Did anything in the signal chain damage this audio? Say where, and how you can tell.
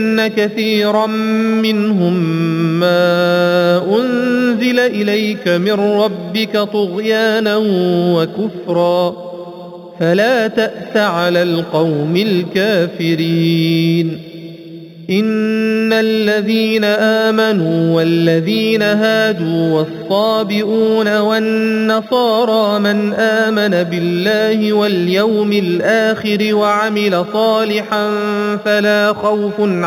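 Yes. Imaging from linear upsampling runs through the whole clip and comes from the sample-rate conversion stage. Real content stops near 4 kHz, and a faint mirrored copy of the spectrum fills the 4 to 8 kHz region, roughly 20 dB below the signal. That points to audio sampled at 8 kHz and raised to 44.1 kHz by straight-line interpolation. That weak filter dulls the top of the band and lets the images through, heard as a light metallic shimmer on the brightest sounds.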